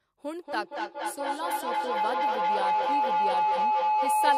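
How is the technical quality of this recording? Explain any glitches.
Technical quality is poor, because a feedback howl takes over almost immediately. From about 0.4 s to the end of the clip, a tone near 1 kHz builds up and peaks at about 7 dB above the speech. Two devices in the same room are on the call, so each pass from microphone to loudspeaker and back adds level instead of losing it. The loop settles on that frequency and pulses roughly every fifth of a second, the round-trip delay, and never breaks.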